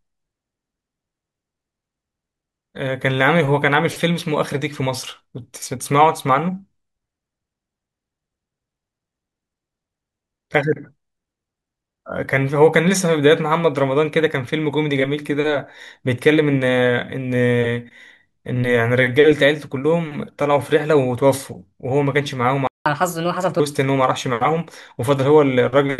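A speech recording with a playback stall from 22.67 to 22.86 s: the sound cuts out for about 185 ms, a flat gap on the waveform and a blank column on the spectrogram, likely because the player ran short of data or its thread was blocked. A catch-up at higher speed follows from 22.86 to 23.60 s, where the backlog is resampled to 1.25 times normal speed, raising the pitch by roughly four semitones. On the spectrogram the harmonics visibly shift upward and pack closer together in time before settling back to normal.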